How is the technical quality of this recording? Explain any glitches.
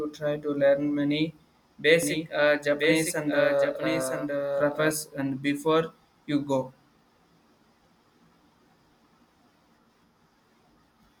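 A doubled audio track runs from 2.03 to 4.91 s, ending just before "and before you". A second copy of the speech, roughly a second late and about 5 dB quieter, trails the original with no room colour, likely from a slower capture path or misaligned edit. It starts and stops abruptly.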